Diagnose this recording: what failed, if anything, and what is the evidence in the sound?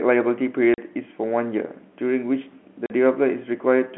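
The network stage failed. Packet loss filled with silence cuts the speech twice, at 0.74 s and 2.86 s. Each hole lasts 40 ms, which fits two 20 ms packets. The receiver played silence instead, so both holes have hard edges. The G.711 telephone band continues on either side.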